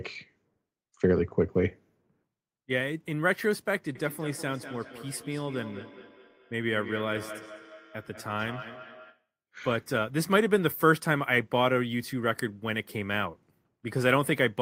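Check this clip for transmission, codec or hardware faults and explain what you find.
There's one fault: feedback echo between two devices, from 3.95 to 9.28 s. A second device in the room replays this microphone's audio, which gets picked up again. Repeats return roughly every fifth of a second, thinner and ringing, peaking about 16 dB below the speech.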